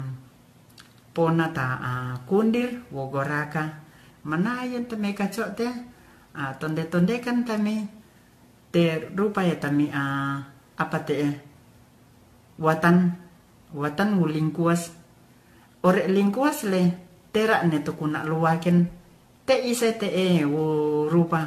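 From start to finish the speech sounds swirly, hollow and smeared, with blurred attacks and nothing above 14.2 kHz: generation loss, likely from re-encoding through a 64 kbit/s AAC-type codec around seven times.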